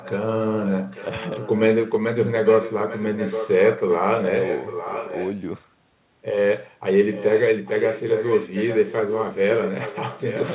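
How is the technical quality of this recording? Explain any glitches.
The recording has one recurring glitch, an echo leak. The sound is also narrowband, with nothing above 4 kHz, which fits a G.711 phone-style call path.

Echo leak appears at 0.00–0.25, 0.46–1.62, 2.44–3.96, 4.20–5.36, 7.13–7.43 s and from 7.65 s to the end. A copy of the speech trails it by about 0.85 s. It starts quiet and grows louder, to roughly 10 dB below the speech. This is likely a far-end loudspeaker feeding its microphone past an incomplete echo canceller.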